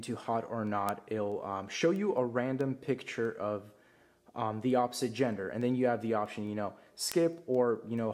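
The audio carries a steady run of sharp ticks of uneven strength, about five per second, from 0.24 s to 7.98 s, some forty in all. These are word clock ticks: the audio passed over a digital link into a device running on its own clock rather than locked to the sender's. With the two clocks apart by something like 100 ppm, they slip past each other about every 0.2 s, and at each slip a few samples are misread and one sample is dropped or repeated.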